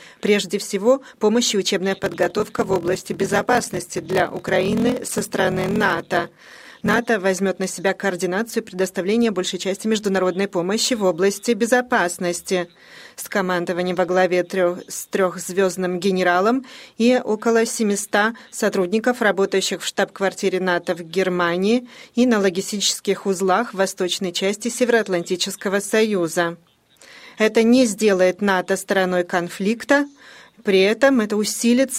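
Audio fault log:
1.92–7.00 s, block size mismatch (padded): one stage hands over blocks of 1024 samples while the next reads larger blocks, which fits a read size near 1152, and the shortfall in each block is filled with silence. That puts a tiny gap in every block, heard as a rough buzz at 41.7 Hz, the block rate. Because the gaps stretch the timeline, the sound plays at 0.889 times normal speed.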